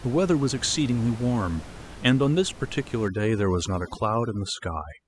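From 3.08 s to the end, overdone noise removal cuts frequency bands near its noise estimate, leaving twinkling near-silence.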